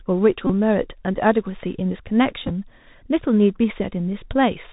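The whole clip carries the Bluetooth CVSD headset codec. The speech is cut off above 4 kHz. Each sample is one up-or-down bit with an adapting step, which fits a 64 kbps link. Here the damage is plainly audible: scratchy s sounds, distorted loud highs and a granular hiss.

At 0.47 to 0.52 s comes a Bluetooth headset packet repeat. About 26 ms of audio was lost. The headset replayed the last packet again and again, which points to about seven lost packets. The steady repeat gives a short buzz near 267 Hz.

At 2.46 to 2.50 s the packet repeat returns in a scattered form. About 19 ms was lost across 45 ms, which fits about five lost packets. The longest run lasts only a few milliseconds. It sounds like broken ticks and rough flickers, not a steady buzz.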